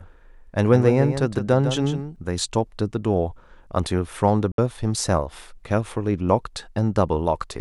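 A doubled audio track runs from the start of the clip to 2.16 s. A second full-band copy trails the original by about 150 ms at roughly 10 dB lower. It is likely a slower capture path mixed back in. It has no decay or room colour, and it stops abruptly at 2.16 s.

A Bluetooth dropout cuts the sound from 4.52 to 4.58 s. The output falls silent for 64 ms, which fits a few lost packets. The likely cause is packets missing their deadline to the headphones. The sound resumes further along, as if it had kept playing.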